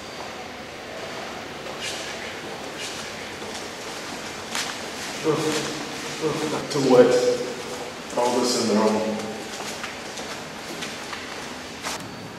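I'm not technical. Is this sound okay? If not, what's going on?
No. A doubled audio track runs from 0.97 to 6.61 seconds: a second, slightly quieter copy of the same sound plays about one second behind the original, starting and stopping abruptly. It's likely caught twice through a slower path, or two copies overlapping in an edit.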